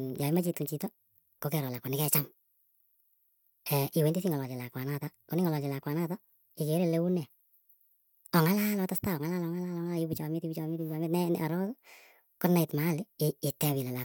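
Wrong sample rate throughout: the speech plays 1.38 times too fast and about 5.5 semitones high, sounding hurried and squeaky, which fits 32 kHz audio played at 44.1 kHz.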